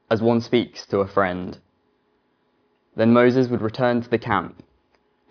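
Nothing in this audio is technically wrong, so there are no problem times or causes to report.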